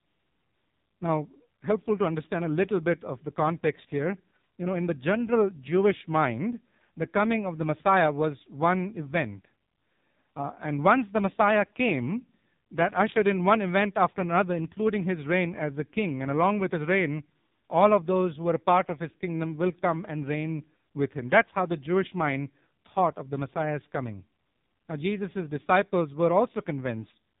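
From start to finish the speech carries heavy AMR narrowband mobile codec damage. The buzzy, synthetic texture fits one of AMR-NB's lowest modes, around 5.9 kbps, where few pulses drive the vocal-tract model. A spectrogram shows nothing above 4 kHz.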